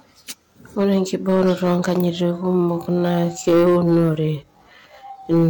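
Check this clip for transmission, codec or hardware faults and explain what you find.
Two problems here: clipping on the loud parts all the way through, and a slowed-down stretch from about 2.1 s to the end.

Hard clipping runs the whole clip. The level was pushed about 8 dB past what some stage could handle, so the peaks get sliced flat. Only a few percent of samples actually hit the ceiling, so you hear it as crackle and a gritty edge on the louder syllables, not a constant fuzz. Those flattened tops spray extra harmonics way up high, which is where the harshness comes from.

From 2.13 s to the end at 5.49 s, the speech suddenly drops to about 0.64 times its original pace while the pitch stays put. It drags, with syllables drawn out. The likely cause is a time-stretched section, where software lengthened the audio to fill a slot and held the pitch steady by repeating short slices of it.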